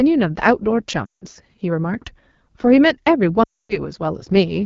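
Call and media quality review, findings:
AMR wideband (HD Voice) codec running at a low rate throughout; rough, raspy speech across the clip, consistent with a bottom-tier mode near 8.85 kbit/s.

Lost AMR speech frames, 1.05–1.24 s and 3.43–3.81 s; decoder repeats last pitch and vocal-tract settings at falling gain, so speech drops to near silence within two frames, then returns rough.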